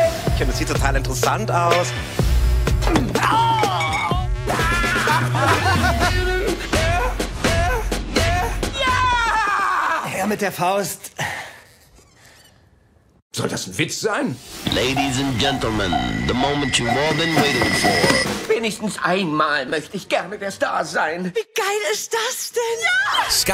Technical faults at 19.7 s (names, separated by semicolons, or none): chunks out of order